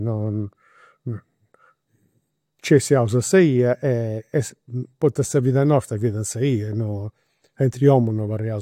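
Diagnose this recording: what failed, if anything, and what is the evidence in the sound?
No failure in any stage; nothing in the sound points to one.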